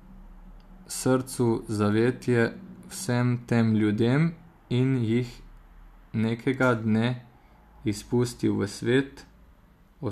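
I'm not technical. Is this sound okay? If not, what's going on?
Yes, nothing in this recording points to a technical problem with how the sound was captured or delivered.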